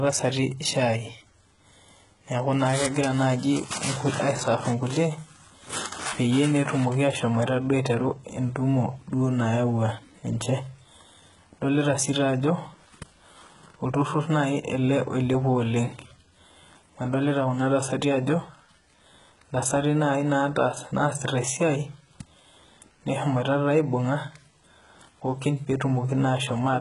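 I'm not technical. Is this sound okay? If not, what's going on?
No. The whole recording sounds heavily squashed. The s sounds come out gritty and lispy, and nothing is heard above about 11 kHz. This is likely HE-AAC compression, which throws away the treble and then fakes it by copying lower sounds upward.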